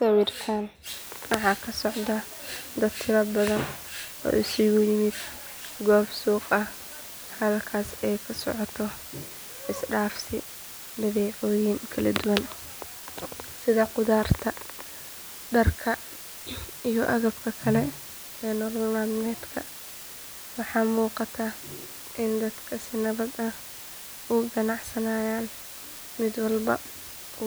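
From 0.86 s to the end, a steady, even hiss sits under the speech. This is low bit depth with dither. The audio was rounded to very few levels, consistent with 7 bits, after dither was added. The error becomes flat noise, roughly 15 dB down, without distortion.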